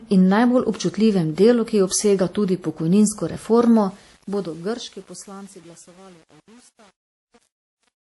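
A speech clip whose whole length has nothing above 11.5 kHz and layered artefacts of transcoding between lossy codecs, likely an MP3 around 48 kbit/s re-encoded to WMA 1 around 64 kbit/s. The fade-out turns gritty from 3.71 s, after "ki obsega tudi pokojninsko". It is worst from 4.21 s to 8.07 s. This is truncation distortion on a fade: the level stage keeps too few bits, which fits an 8-bit stage, and adds no dither.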